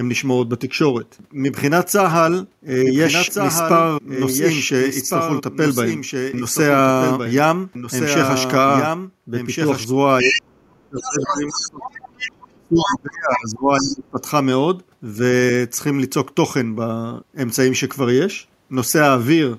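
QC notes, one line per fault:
2.80–9.84 s, doubled audio track: a second full-band copy of the speech runs roughly one and a half seconds behind the original, only a few decibels quieter, so every phrase is heard twice with no room colour or decay on the repeat, and it starts and stops abruptly at the range edges. This points to the same audio likely being mixed in twice, either captured again by a slower path or held out of step by an edit.
10.21–12.50 s, 12.86 s, 13.79–13.95 s, other side's voice leaking through: a second voice comes through alongside the talker, in the first stretch and then in brief scraps, at about 5 dB below the speech at first and about 10 dB below in the last scrap. This is likely loudspeaker playback of the far end picked up by the microphone and not fully removed by the echo canceller.
10.22–12.13 s and 12.52–14.20 s, speech suppressed in double talk: the talker's level dips sharply while the other voice is present, falling by as much as about 30 dB, with roughly one and a half seconds affected in each stretch. 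The likely cause is the echo canceller failing to separate the talker from the loudspeaker echo during simultaneous speech and turning both down.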